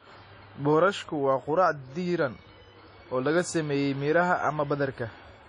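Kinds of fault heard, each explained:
WMA compression: The speech has a ringing, washy quality, and a hiss rises and falls with the signal instead of sitting steady beneath it. Nothing is present above about 10.1 kHz, and the damage is plainly audible, which fits a bitrate around 32 kbps. The likely cause is a WMA transform codec whose long blocks smear quantisation noise over tens of milliseconds. A plain low-pass filter would dull the top without adding this swirling, signal-tracking noise.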